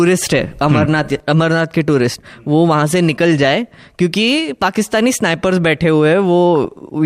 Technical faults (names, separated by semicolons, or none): DAB burbling